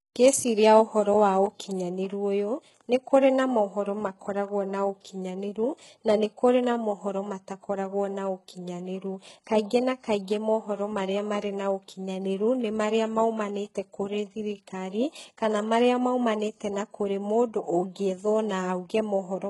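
HE-AAC compression runs through the whole of this speech clip. The treble is heavily damaged: s sounds come out gritty and lispy, and nothing remains above 11.5 kHz. The likely cause is spectral band replication at a very low bitrate, around 12 kbps, rebuilding the upper band from copied lower harmonics instead of the original detail.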